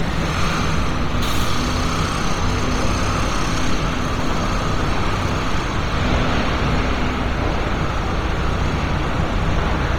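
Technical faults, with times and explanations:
Throughout, Bluetooth LC3 compression: the upper range turns grainy and breathy because missing detail is filled with noise rather than removed. Unlike a plain low-pass, the sound still reaches 20.2 kHz. This fits 10 ms frames near 32 kbps, likely LC3 coding.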